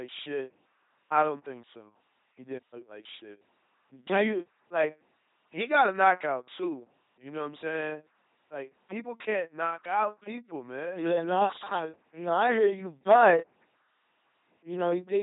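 From start to finish the speech has a buzzing, mechanical robot quality, with stray buzz or hiss where voicing is misjudged and nothing above 3.8 kHz. This is heavy LPC-10 vocoder damage: at 2.4 kbit/s, a simple filter is driven by either pulses or noise, never both.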